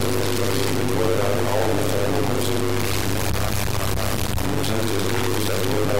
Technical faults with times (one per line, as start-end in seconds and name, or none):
0.00-6.00 stuck bit
0.00-6.00 overlap-add ripple